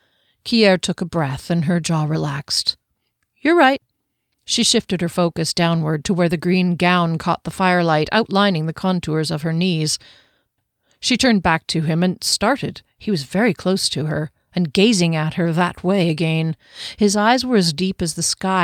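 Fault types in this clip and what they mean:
No fault types are present in this clip.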